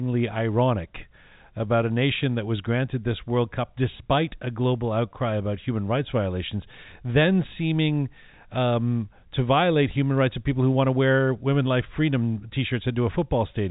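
No technical faults can be heard in this speech; it comes through a working call path whose band stops at 4 kHz, which fits a G.711 A-law codec at 64 kbps.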